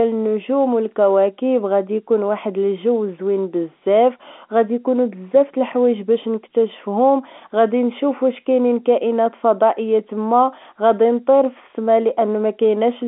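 No technical faults can be heard in the speech, which carries the narrow telephone band of G.711 telephone coding, running from about 250 Hz to 3.4 kHz with nothing above 3.7 kHz.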